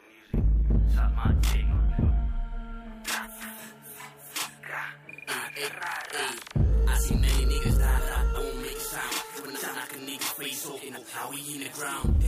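The audio has a channel delay, heard as doubling, for its whole length. One channel arrives about 40 ms behind the other, and the two are summed to mono. That gap is too long to blend into a single image. A second copy follows each sound at equal level, like a tight slap echo. Every onset is smeared into a double attack. Sharp transients show it most clearly.

There are also six stretches of frames out of order: 1.70–2.11 s, 3.04–3.45 s, 5.27–5.69 s, 7.97–8.37 s, 9.36–9.76 s and 10.76–11.15 s. In each, two neighbouring blocks of about 186 ms play in swapped order. The pattern fits runs of four frames each. The result is a brief garbled flutter. The timeline stays intact, so no time is lost.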